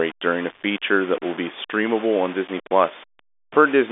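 From start to finish the speech carries a coarse, grainy distortion that rises and falls with the talker, sitting only around 20 dB below the signal. It most likely comes from low bit depth without dither, rounded to a scale that fits about 5 bits, beneath the narrow telephone band.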